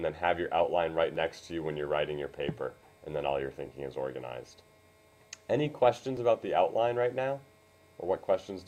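Overlapping chunks at 1.16, 3.66 and 6.17 s: each 2.5 s chunk starts early, replaying about 6.5 ms at the join, heard as a regular click.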